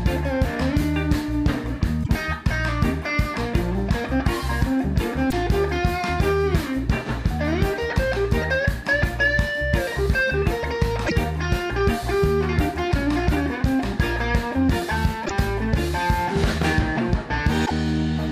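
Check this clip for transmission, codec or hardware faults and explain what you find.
One fault recurs five times: damaged data in a compressed stream, at 2.00–2.10, 5.27–5.33, 11.04–11.12, 15.22–15.31 and 17.62–17.72 s. Each is a short squawk or blip of under 0.1 s. Corrupt bytes make the decoder misread frames and hunt for the next header.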